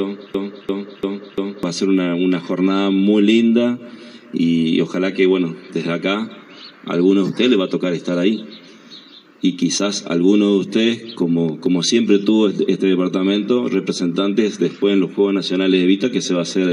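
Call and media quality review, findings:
Broken-record loop, 0.00 to 1.63 s, already running when the clip opens. A roughly 344 ms fragment repeats back to back, 4 times. Likely a player or stream stall that kept replaying its last held chunk. Whatever should have played in that first stretch is gone, not just delayed.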